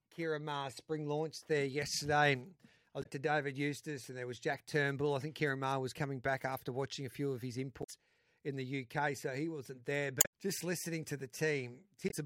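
Four short glitches break up the speech, at 2.99 to 3.06 s, 7.80 to 7.90 s, 10.18 to 10.26 s and right near the end at 12.07 to 12.14 s, each lasting under a tenth of a second. They're damaged data in the compressed stream: the bytes in those spots are wrong, so the decoder garbles or drops the frames, loses its place and has to hunt for the next clean frame header. What you hear each time is a brief glitch cutting into the audio.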